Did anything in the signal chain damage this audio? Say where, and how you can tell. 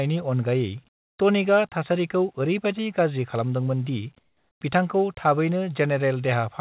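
Yes, at the call-processing stage. From 0.89 to 1.19 s, before "टनिकआ थासारिखौ", and 4.19 to 4.61 s, after "गाज्रि खालामदोंमोन दि", the background becomes flat hiss, about 16 dB and 8 dB quieter. A spectrogram shows uniform, detail-free texture there. This is likely comfort noise in place of the background, from discontinuous transmission.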